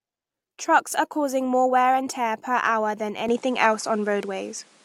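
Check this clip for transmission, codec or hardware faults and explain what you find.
One fault is present. From 3.29 s, just after "tear per hour than", the sound abruptly dulls, with nothing above 11.4 kHz. The level shifts by about 5 dB and faint new background noise appears, with no gap. The likely cause is an input switched to a poorer device with a narrower band.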